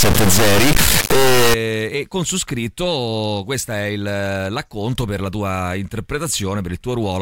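A speech clip with an integer read as float fault from 0.00 to 1.54 s, a sound that points to 32-bit integer samples being interpreted as 32-bit floats. Each integer's bits then decode as a meaningless number: either almost zero or vastly beyond full scale. The output snaps between silence and the clipping limit, so the opening 1.54 s is an extremely loud, harsh, buzzing square wave that collapses to silence wherever the underlying speech is very quiet.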